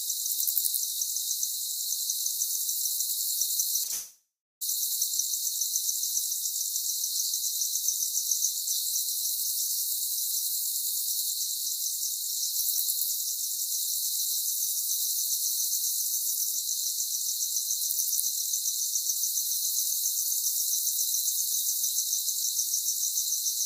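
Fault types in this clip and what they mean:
Short concealed packet loss: Two brief smears run back to back, from 3.83 to 3.87 s and from 3.87 to 3.91 s, each giving the sound a wobble rather than a clean gap. About 20 ms of audio went missing each time, and the receiver papered over the hole by extending the preceding sound for roughly that long before blending back in. Because the two events are adjacent, they lead straight into the longer break.
Long network dropout: From 3.91 to 4.63 s the sound turns into a fading continuation of itself for a few tenths of a second, then gives way to about 0.35 s of silence before the real audio resumes. Roughly 0.7 s of material never comes back. The likely cause is a stretch where no packets arrived, so the receiver stretched the last sound until it faded out and then played nothing until the stream returned.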